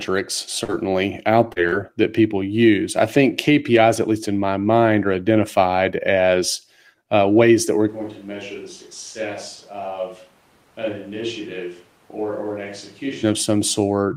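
At 0.64 s, 1.52 s and 1.68 s, brief smears: short concealed packet loss, where about 40 ms went missing each time and the decoder extended the preceding sound to cover the gap. From 7.9 s to 13.2 s the speech turns hollow and roomy, roughly 10 dB quieter, with background noise only about 25 dB below it, likely a switch to a distant microphone.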